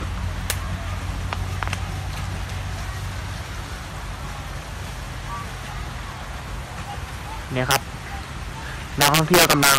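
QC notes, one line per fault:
0.50 s, integer overflow: a crack where the level was pushed about 9 dB past the integer limit, so the peak wrapped to the opposite sign instead of flattening as in clipping.
7.71–7.76 s, integer overflow: about 6 dB overdrive makes peaks jump across the full range rather than squaring off, giving a sharp crack unlike clipping's duller distortion.
9.01 s to the end, integer overflow: with about 10 dB overdrive, each peak over the limit flips sign, giving violent cracks on peaks, sharper than clipped peaks would sound.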